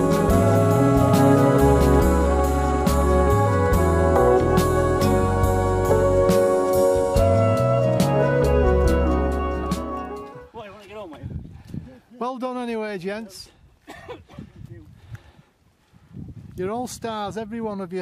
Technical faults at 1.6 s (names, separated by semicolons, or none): doubled audio track